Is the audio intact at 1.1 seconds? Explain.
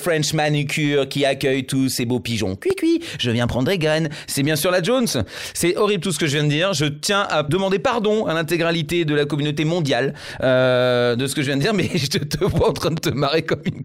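Yes, the audio at 1.1 seconds is intact, with no dropout, click, distortion or other fault at that point.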